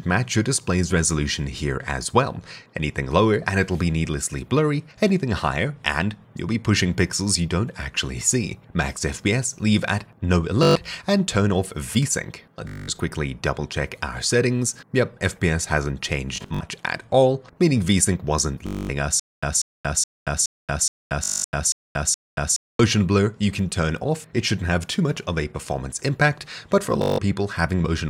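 At 10.63 to 10.76 s comes the first Bluetooth stutter: about 122 ms of audio goes missing and the receiver fills the hole by replaying its last short slice, giving a brief buzzing judder. On a waveform this is a tiny block copied end to end. A spectrogram shows thin, evenly spaced vertical stripes. The same fault returns at 12.68 to 12.88 s (about 203 ms lost), at 16.36 to 16.61 s (142 ms lost in pieces spread over 244 ms, the longest unbroken run 61 ms), and at 18.67 to 18.89 s (224 ms).

From 19.20 to 22.79 s a stutter with silent gaps takes over. A 191 ms fragment plays, then 230 ms of digital silence follows, on a steady 421 ms cycle repeated eight times. The likely cause is a stalled stream replaying its last fragment at each retry before running dry. The waveform shows identical bursts separated by flat lines, and the spectrogram shows matching blocks with black gaps between them. 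Inside this stretch, at 21.24 to 21.44 s, another Bluetooth stutter drops about 203 ms.

The final Bluetooth stutter, at 27.02 to 27.18 s, loses about 163 ms with the same repeating-slice buzz.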